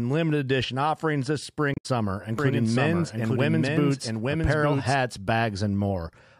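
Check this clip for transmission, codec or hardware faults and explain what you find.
Two faults turn up in this speech clip: a burst of damaged data in a compressed stream, and then a stretch of doubled audio track.

From 1.71 to 1.86 s, just after "limited edition offerings this", there's damaged data in the compressed stream. Some bytes arrived corrupted, so the decoder misread those frames, lost sync and hunted for the next header. You hear it as a brief disruption in the speech.

From 2.39 to 4.95 s there's a doubled audio track. A second full-band copy of the speech runs roughly a second behind, about 5 dB quieter. It's likely a second capture through a slower path. The copy has no room colour or decay, and it cuts in and out abruptly.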